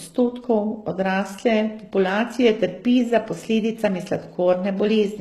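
From start to finish the speech has a bright but synthetic treble: sibilants come out gritty and lisping, with a metallic sheen. This is likely HE-AAC compression at a very low bitrate, one that fits roughly 16 kbps. The codec stores only the lower band faithfully and rebuilds the top by copying lower bands upward under a coarse envelope, so the upper harmonics no longer line up with the ones below.

At 2.09 s a single sharp click cuts through, a thin instant tick rather than any gap in the speech. The cause is likely dropped samples: a handful of samples, a tiny fraction of a millisecond, vanish from the stream, and the waveform jumps straight from one value to a later one. The loss is far too short to take out any sound, but the sudden step in the waveform produces the broadband click.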